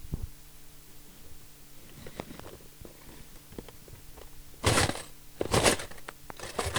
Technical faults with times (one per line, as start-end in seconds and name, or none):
2.20-2.42 loud pop
6.09-6.32 loud pop